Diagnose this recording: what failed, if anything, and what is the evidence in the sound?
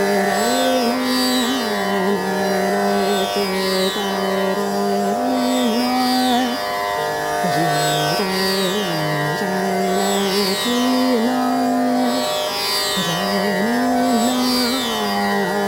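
Sample clock jitter at the converter stage runs through the whole recording: a hiss-like roughness swells with loud, bright passages and disappears in silence. Timing wander of roughly ten microseconds puts the error only about 20 dB below signal. Spectrograms show broadband haze tracking high-frequency energy.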